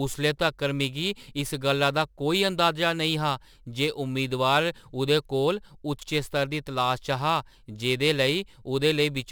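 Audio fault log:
throughout, crude rate conversion: samples are repeated instead of filtered, which fits a 44.1 kHz to 48 kHz change, leaving a gritty, inharmonic fizz about 25 dB below the speech on loud, bright syllables. Spectrograms show faint non-harmonic streaks; waveforms show tiny stair-steps.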